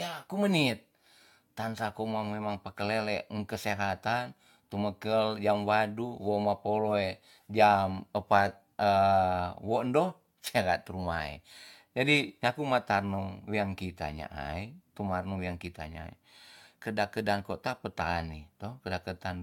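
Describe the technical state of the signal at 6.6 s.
At 6.6 s you're hearing generation loss, and it isn't local: it runs through the whole clip. The speech has that swirly, smeared, hollow quality, with consonant attacks blurred and nothing above 17 kHz. The likely cause is the audio going through AAC-LC at 96 kbit/s around four times, each pass requantising on a shifted frame grid, so the noise and spectral holes pile up beyond what one encode would leave.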